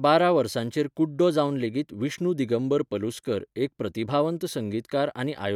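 No technical faults are audible.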